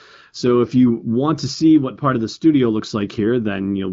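Nothing stood out on listening to this speech.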